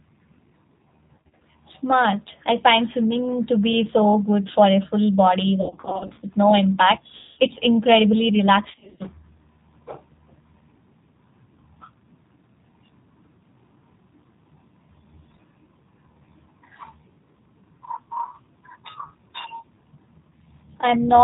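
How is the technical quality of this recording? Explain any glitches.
Quality is poor. The whole clip carries narrowband codec damage, and four stretches break up from packet loss.

G.729 codec, throughout. Nothing above 4 kHz survives, so the speech sounds boxed-in, rough and faintly synthetic. The codec rebuilds each short frame from a vocal tract filter, a pitch predictor and a few pulses. The damage is plainly audible and fits G.729A at 8 kbit/s.

VoIP packet loss concealed by the speech codec, at 1.17 to 1.40 s, 5.62 to 6.20 s, 7.17 to 7.38 s and 8.70 to 9.04 s. Packets went missing. The decoder filled each gap by extending its last pitch and filter while turning the gain down. That smears the speech into a buzzy, fading tone. Recovery lags, because each frame builds on the one before. The first stretch lost about 140 ms scattered over 240 ms, with runs of at most 30 ms. The second is worst, losing 340 ms across 560 ms, with a 70 ms run. 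The third is a solid 200 ms gap. The fourth lost 210 ms over 300 ms, with runs up to 60 ms.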